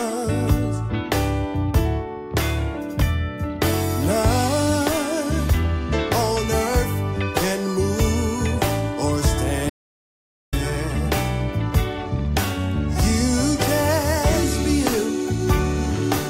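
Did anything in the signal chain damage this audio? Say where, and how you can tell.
Yes. There is an audio dropout to silence from 9.70 to 10.53 s. The sound stops abruptly, mid-flow, and returns just as suddenly. The gap of about 0.83 s is silent, with no room tone or noise floor underneath. That points to the capture side, not playback. The input was likely lost at the device or link stage while the recorder kept writing empty samples. Whatever happened during those 0.83 s is gone.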